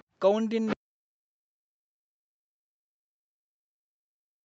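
A faint second voice sits beneath the speech at 0.00 to 0.04 s, barely audible, and again at 0.66 to 0.75 s, much closer in level, only about 10 dB down. This is the other side's voice leaking through, likely loudspeaker echo that the echo canceller failed to remove. From 0.75 to 1.1 s, 1.38 to 2.18 s, 2.49 to 2.98 s and 3.18 s to the end, the speech sinks and breaks up, dropping by as much as roughly 40 dB. This is speech suppressed in double talk, likely the canceller turning everything down while both sides spoke at once.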